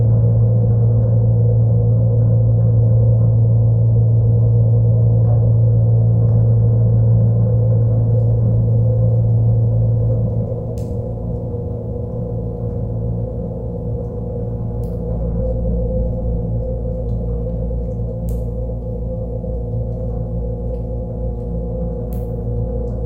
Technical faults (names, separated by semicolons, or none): mains hum